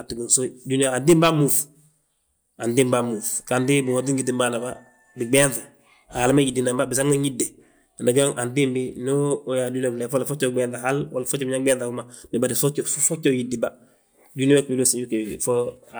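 Speech, with nothing technically wrong with it.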